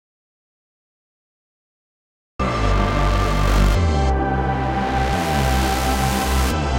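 From the start until 2.39 s the clip is an audio dropout to silence: true silence with no room tone, then sound cutting in abruptly mid-flow. Likely the input was lost while recording continued. Unlike a gate or fade, nothing ramps or breathes.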